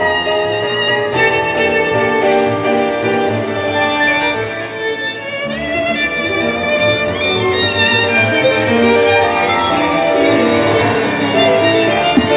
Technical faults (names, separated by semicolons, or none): none